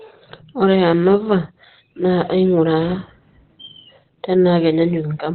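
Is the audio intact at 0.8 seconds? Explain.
No. At 0.8 seconds, as across the whole clip, the speech sounds muffled and hoarse, with nothing above about 4.2 kHz. This is likely Opus compression at a very low rate. Short of bits, the encoder narrows the bandwidth and switches to its SILK speech mode, which models the voice rather than each frequency band. The heavy, narrowband damage fits a bitrate around 12 kbps.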